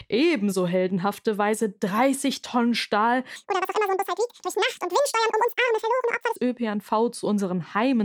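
From 3.36 s to 6.36 s the speech jumps to double speed and a full octave up, the classic audio read two samples at a time fault: the reader swallowed sample pairs as single frames, so everything races by chipmunk-high.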